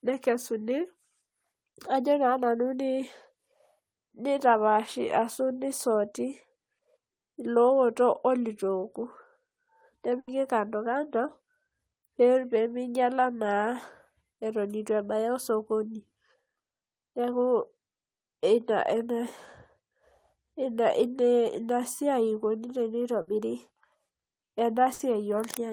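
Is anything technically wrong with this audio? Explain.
Yes. The speech has three bursts of packet loss, at 10.19 to 10.29 s, 23.21 to 23.29 s and 24.93 to 25.01 s. Each time, consecutive packets never arrived in time, so the receiver stretched the last sound it had and faded it, for 80 ms in the first case and 60 ms in the other two. The gap is filled with a decaying buzz or hiss, not dead silence, which distinguishes it from a plain dropout. Speech then resumes with that stretch missing.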